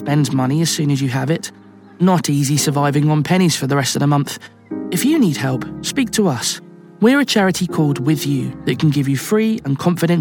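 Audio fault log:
No technical faults can be heard anywhere in the signal, which stays continuous throughout.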